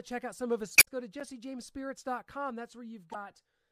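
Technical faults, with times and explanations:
0.75 to 0.87 s: damaged data in a compressed stream. Right after "out some of his", the speech breaks up briefly before "go to". Corrupted bytes made the decoder misread its frames and lose sync. It then skipped ahead to the next valid frame header.
1.20 s: block of digital silence. Just after "go to", the speech drops to silence for 8 ms and returns with no fade. So short a gap is heard as a tick or dip. The likely cause is an output buffer not filled in time.
3.11 to 3.15 s: damaged data in a compressed stream. A brief 44 ms blip interrupts the speech. Again the decoder hit bad frame data and lost sync. The sound broke up while it searched for the next usable frame.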